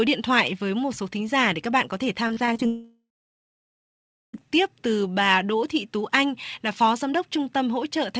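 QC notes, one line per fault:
2.28–2.60 s, repeated packet loss (robotic sound): packets kept going missing or arriving too late over this third of a second, and the receiver patched each hole by stretching the sound just before it. About 100 ms was lost in short holes, the longest 28 ms, with roughly 28% of the span rebuilt this way. The stitched fragments give a choppy, robotic texture with small pieces missing.
2.66–4.47 s, long network dropout: this is likely a lengthy break in packet delivery, with about 1.7 s of audio never played. The receiver first carries the last sound forward as a fading buzz, then gives up, leaving about 1.3 s of near silence before the audio resumes at 4.47 s, picking up later in the utterance with the lost stretch simply gone. The band-limiting to 8 kHz throughout comes from the G.722 call codec and not from this dropout.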